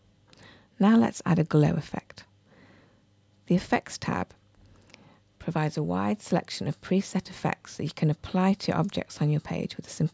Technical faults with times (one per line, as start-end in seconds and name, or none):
none